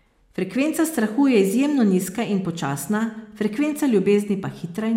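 No technical faults detected.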